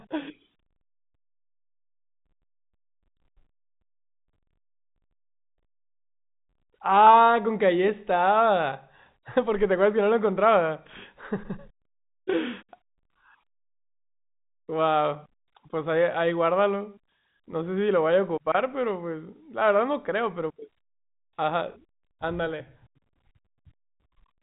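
The clip is speech, and nothing in it is technically wrong.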